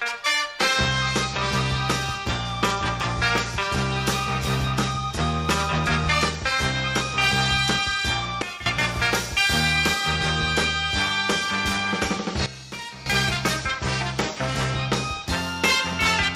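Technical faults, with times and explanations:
8.42–8.66 s and 12.46–13.06 s: sudden gain jump. A digital gain change was likely applied from one sample to the next with no ramp, dropping the level by about 12 dB for 0.24 s and then by about 13 dB for 0.6 s before snapping back. The sound and its background noise fall together, so the level drops abruptly and returns just as abruptly at each boundary instead of fading.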